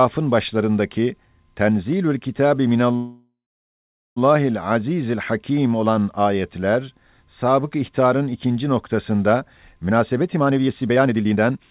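At 2.96 s the speech stops and the last sound hangs on as a fading buzz or hiss. It drops to silence for about 0.82 s. Speech resumes at 4.18 s from where it stopped. This is a call audio freeze, likely from delayed packets emptying the jitter buffer.

After "sabık ihtarın ikinci noktasında", from 9.87 s to 11.69 s, the speech rushes at 147% speed with unchanged pitch. This is a jitter buffer speed-up. The receiver cut short pitch-period slices to shed about a second of backlog. The narrowband sound, with nothing above 4 kHz, fits a G.711 call codec.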